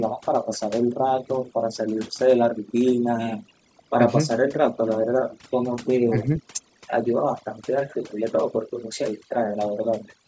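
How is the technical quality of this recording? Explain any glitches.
The recording has audible processing faults throughout and several brief glitches in the second half. Its bandwidth tops out at 8 kHz, as call microphone processing leaves it.

Overdone noise removal, throughout: the background drops to near-silent, twinkling specks, because an overly aggressive noise reducer is muting frequency bands it mistakes for noise.

Echo leak, 5.3 to 5.4 s: a faint delayed copy of the voice, roughly 25 dB down, trails about 482 ms behind, likely loudspeaker pickup that the far side's echo canceller failed to remove.

Speech suppressed in double talk, at 6.09 to 6.3 s, 7.82 to 7.87 s and 9.58 to 9.67 s: the voice briefly dips by roughly 20 to 30 dB, likely because an echo canceller mistook it for echo while both sides talked at once.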